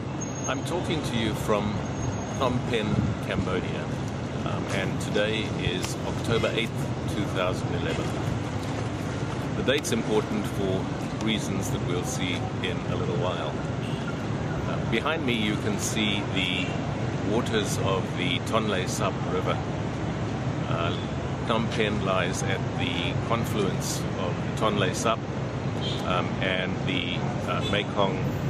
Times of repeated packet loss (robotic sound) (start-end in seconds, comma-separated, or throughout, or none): none